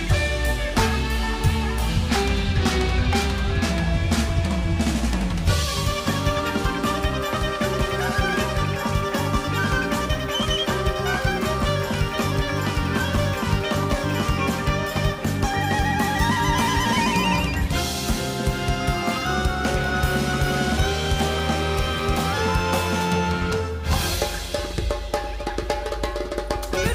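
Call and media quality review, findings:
No faults heard on review; capture, transport and playback paths show no audible defect, nothing to raise.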